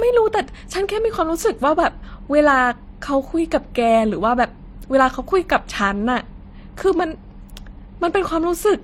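Throughout the speech, two kinds of coding damage sit on top of each other. Nothing is left above 16.3 kHz. The first coding stage points to MP3 at around 44 kbit/s. Then HE-AAC near 32 kbit/s likely re-encoded it. This is transcoding between lossy codecs.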